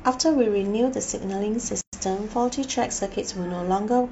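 At 1.81 s the speech drops into a gap at a join of encoded pieces, an opening of about 118 ms until 1.93 s. Two separately encoded chunks were stuck together untrimmed, so encoder delay and end padding sit in the middle, with smeared edges, before the speech picks up where it stopped.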